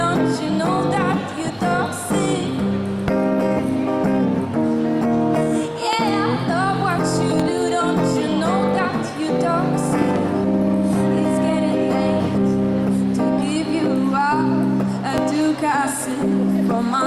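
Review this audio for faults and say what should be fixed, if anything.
Loud pops break through the sound at 3.08–3.10 s, 5.93–5.95 s, 7.40–7.42 s, 10.02–10.18 s and 15.18–15.20 s. The one at 10.02–10.18 s is a double pop. Most peak about 15 dB above the surrounding level. The pop at 7.40 s is softer, about 10 dB above. The sound carries on underneath each one. The likely cause is a sudden voltage step from a switch, loose plug, static discharge or driver glitch. The following circuits shape that step into a sharp thump. To prevent it, secure the connectors, avoid switching gear while recording, and keep the audio driver stable.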